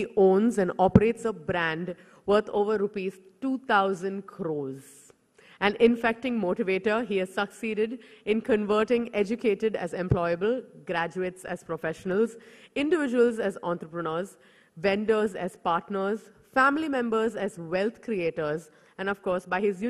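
DAB burbling appears at 11.48 s as a brief watery blip. Weak reception let a small share of bit errors, well under a tenth of a percent, slip past the error correction into the MP2 data. Corrupted samples throw short bursts of noise into individual sub-bands, and any damaged scale factors make a sub-band jump in level for up to a frame. The event is short enough to suggest only a couple of frames were affected.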